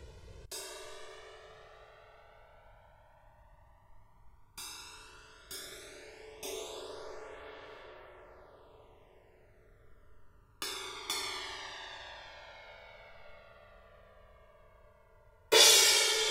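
The channels drift apart across the whole clip: two clocks disagreeing by a few hundred ppm slide the delay out to around 2 ms, so mono sounds slowly flanged.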